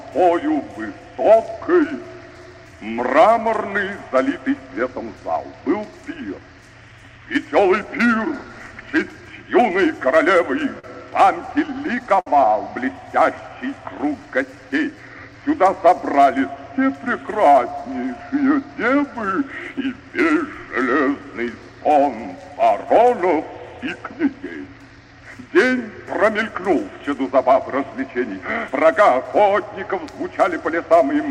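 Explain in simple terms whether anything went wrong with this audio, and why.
Around 10.79 s there is a short stall from a late packet. One chunk of audio arrived late. The player stretched the last bit of sound for about 42 ms while it waited, then carried on. Nothing was lost, but one moment hangs on a little too long.

From 11.50 s to 12.27 s come repeated stalls (stutter). The late arrivals kept happening, so the sound held and resumed five times. Together the holds add up to 95 ms, and the longest is 61 ms. Again nothing is missing, but the sound catches and drags.

Between 12.93 s and 15.39 s there is a jitter buffer slow-down. The player's waiting store of audio ran low, so it repeated tiny slices of sound to rebuild it. This added 157 ms. The sound plays at about 94% speed without changing pitch, so it feels drawn out.

From 17.54 s to 20.02 s there is a jitter buffer speed-up. 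Now too much audio had piled up, so the player cut out tiny slices, roughly 150 ms in all. The sound runs at about 107% speed at the same pitch and comes across as hurried.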